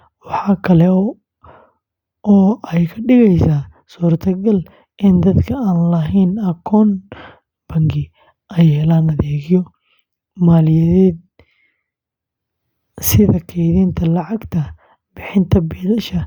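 Nothing goes wrong anywhere in this bit of speech, so there's no fault to point to at any moment.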